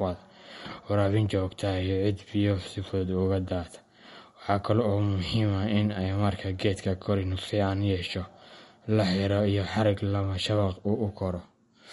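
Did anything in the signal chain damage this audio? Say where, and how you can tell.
Yes. MP3 compression runs throughout this speech. At the codec stage, the treble stops dead at 11.2 kHz, and the audio has a plainly audible watery swirl as weak frequency lines flicker between frames. This likely comes from a starved encoder, which fits about 48 kbps.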